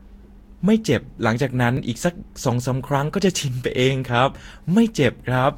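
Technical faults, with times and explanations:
Throughout: generation loss. The speech has likely been through a lossy codec several times, something like three Vorbis passes at around 65 kbit/s each. Every pass requantises on a shifted frame grid, so its noise and spectral gaps pile on top of the last, leaving the sound swirly, hollow and smeared beyond what a single encode at that rate would give. Consonant attacks lose their edges, and nothing survives above 16.6 kHz.
1.77 s: dropped buffer (overrun). The capture side likely failed to read a block of samples before the hardware wrote over it, so roughly 10 ms of audio disappeared and the sound on either side was spliced directly together. Because no silence fills the gap, the result is a sudden jump in the sound, and the speech lurches forward by that small missing slice rather than pausing.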